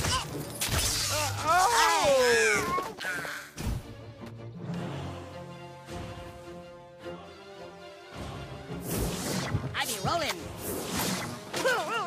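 At 1.26 s a brief burst cuts into the sound and clears by 1.31 s. This is a corrupt frame decoded. Bits inside a compressed frame were damaged, yet the decoder played it anyway. Misread gains and codes pushed energy into the wrong frequencies for the span of the damaged data. The 50 ms length points to roughly two frames hit. It is heard as a sharp chirp or blip of noise, peaking around -20 dBFS.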